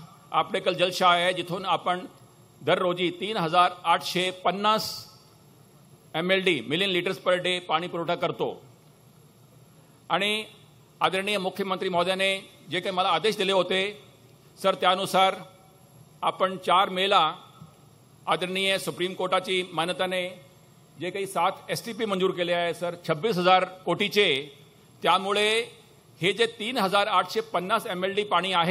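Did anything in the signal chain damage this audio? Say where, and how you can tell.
No, nothing in the signal chain damaged this audio.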